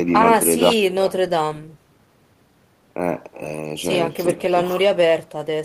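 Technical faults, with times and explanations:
Throughout, echo with no canceller: every stretch of speech returns roughly 0.4 s later as a fainter copy, about 18 dB down, because the far end's loudspeaker feeds its microphone and nothing subtracts it before the signal travels back. The copy sounds thin from that loudspeaker-to-microphone path. On a waveform, each burst trails a smaller delayed twin; on a spectrogram, the speech patterns repeat faintly to the right, lacking low end.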